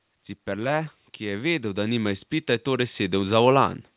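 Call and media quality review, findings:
Automatic gain rising, 0.12 to 3.43 s. Speech and background noise floor swell together, roughly 11 dB louder by the end. Probable component: AGC in the call's microphone processing, reading the input as too quiet and ramping gain up slowly over several seconds rather than per syllable. Top end stops near 4 kHz, which fits a narrowband G.711-style codec.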